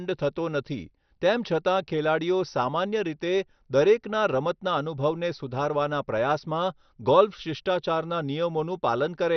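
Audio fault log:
throughout MP2 compression: the speech sounds dull and muffled, with a gurgling, grainy roughness and nothing above 6.2 kHz. This is likely heavy MPEG Layer II coding that starves the upper sub-bands until they drop out and coarsens the rest, which fits about 48 kbps.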